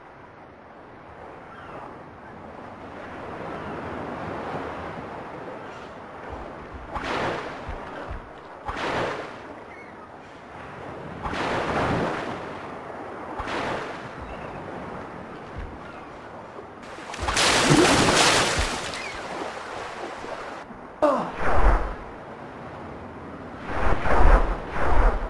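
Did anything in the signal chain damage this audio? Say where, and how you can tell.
No, no stage damaged it.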